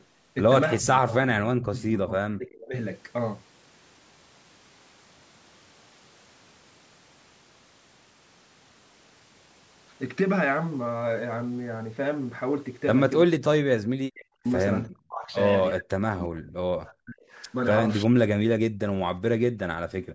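From 0.00 to 0.04 s there is a faint echo leak. A copy of the speech returns about 342 ms late, very quietly. The far end's echo canceller likely failed to remove its loudspeaker sound from its microphone.

Speech suppressed in double talk follows. It occurs at 0.80–2.75 s, 13.24–14.46 s, 14.87–15.36 s, 15.72–17.35 s, 18.05–18.22 s and 19.52–19.57 s. The talker's level plunges sharply, then returns. The last dip is much shallower. Both sides speaking at once likely confused the canceller.

From 20.00 s to the end, the background is gated by the echo canceller. The room sound drops by about 40 dB for roughly 150 ms. The canceller clamps the microphone while the loudspeaker plays. Content above 8 kHz is absent, as expected from call microphone processing.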